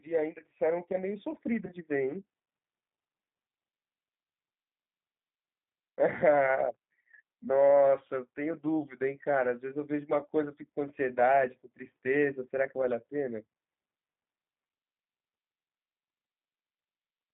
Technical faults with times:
0.00-17.34 G.729 codec
1.66-1.72 VoIP packet loss concealed by the speech codec

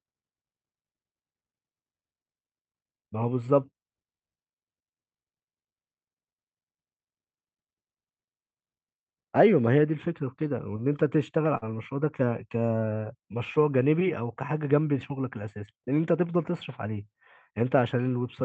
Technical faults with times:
11.57-11.65 short concealed packet loss

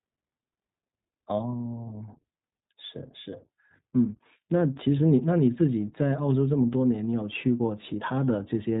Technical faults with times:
0.00-8.80 iLBC codec

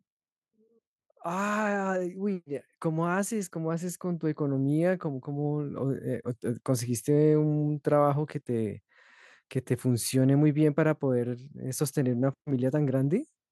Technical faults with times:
1.23-4.50 automatic gain rising

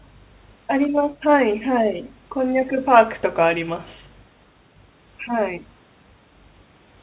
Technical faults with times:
none

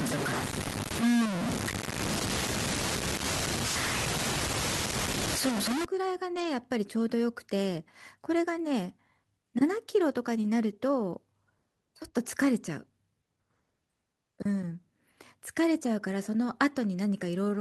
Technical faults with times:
0.00-5.85 low bit depth without dither
6.35-6.45 lost packet rebuilt from error correction

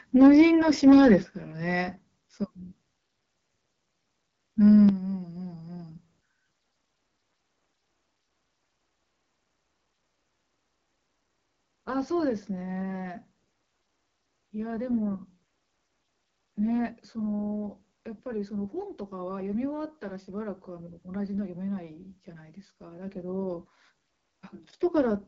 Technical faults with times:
0.00-25.28 AMR wideband (HD Voice) codec
0.21-0.42 microphone overload
0.22 microphone volume stepped down
0.86-1.16 microphone overload
1.23 microphone volume stepped down
4.89 microphone volume stepped down

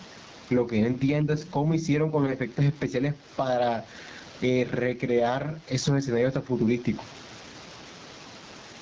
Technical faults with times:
0.00-8.82 gain pumping
0.00-8.82 AMR wideband (HD Voice) codec

